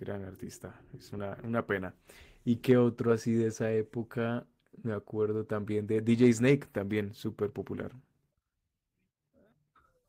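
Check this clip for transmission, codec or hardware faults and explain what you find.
I hear no technical fault anywhere in this speech recording. The sound runs continuously, with nothing that calls for comment.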